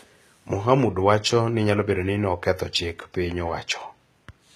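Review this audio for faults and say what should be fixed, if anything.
The speech has plainly audible HE-AAC compression damage from start to finish, likely from an encoder run at a very low rate, which fits a bitrate around 20 kbps. Only the lower spectrum is coded; the treble is synthesised by copying lower bands upward under a coarse envelope. The top end keeps its brightness, but its harmonics no longer line up with the real ones, so s sounds come out gritty, metallic or lisping. Encoding at a higher bitrate, or with a full-band codec, would keep the original treble.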